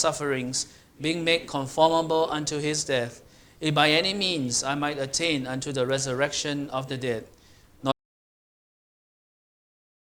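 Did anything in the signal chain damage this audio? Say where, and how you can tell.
Yes. At 7.92 s the sound cuts to total silence through to the end, with no room tone. This audio dropout to silence likely came from a lost input link, not the converter.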